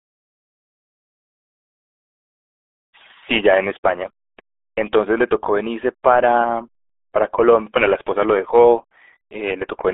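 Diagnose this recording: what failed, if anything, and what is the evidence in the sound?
The codec stage failed: the whole recording bears the marks of the RealAudio 14.4 codec. From start to finish the speech is confined to roughly 300 Hz to 3.6 kHz, with nothing at all above 3.8 kHz, and it sounds muffled and gargly throughout. The heavy damage fits a speech codec squeezed to about 8 kbit/s for dial-up, which rebuilds the voice from coarse parameters. A plain telephone-line band limit would sound narrow but clean, not gargled like this.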